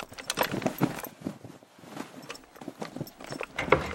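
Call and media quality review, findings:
Nothing stood out on listening to this recording.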